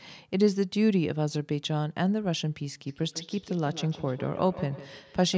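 From 2.87 s to the end, feedback echo between two devices appears. A second device replays this microphone's sound, which is picked up again. Each syllable returns roughly every 150 ms, thinner and ringing, peaking at about 16 dB below the speech.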